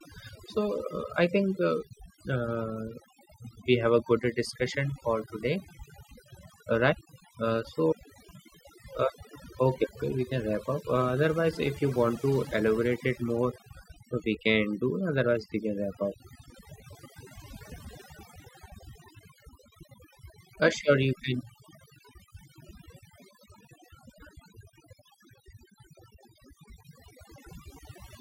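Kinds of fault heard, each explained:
Overdone noise removal: the pauses between phrases fall to near silence flecked with twinkling, chirpy specks. This comes from noise reduction set far too strong, which pulls individual frequency bands down or out whenever they sit near the noise estimate, taking quieter parts of the speech with them.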